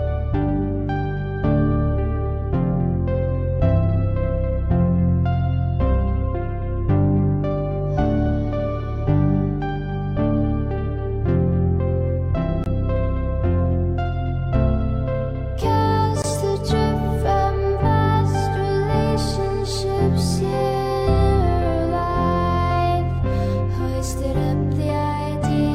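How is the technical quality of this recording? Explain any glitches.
The recording has two short dropouts, both a block of digital silence. At 12.64 to 12.66 s and again at 16.22 to 16.24 s, the program producing the audio likely failed to deliver a 20 ms chunk of samples in time, so that stretch came out as zeros. The sound switches off and back on with no fade. At 20 ms, each dropout is heard as a brief pop with a tiny hole in the sound.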